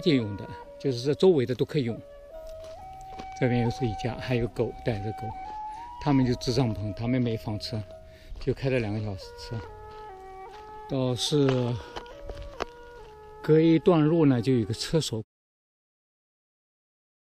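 No technical faults are audible.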